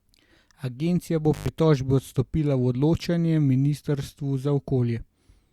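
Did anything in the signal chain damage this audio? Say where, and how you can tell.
Yes, and it looks like the analogue wiring. There's an intermittent contact fault between 1.33 and 1.48 s. The speech drops out for about 93 ms, with crackle as the line breaks and again as it makes contact, and faint hiss in the gap. That's a loose cable or plug briefly losing its connection, so the signal disappears before it ever reaches the converter.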